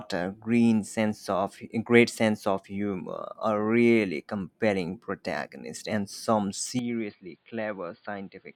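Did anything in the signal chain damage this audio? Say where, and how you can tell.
Yes, at the input stage. From 6.79 s to the end at 8.56 s the speech turns dull and boxy, with nothing above 4.8 kHz, a level drop of about 10 dB, and a new noise floor about 40 dB below the signal. The change is instant, with no silence at the join. That pattern points to the input switched to a poorer device, likely a narrower-band microphone or headset call profile with its own gain and self-noise.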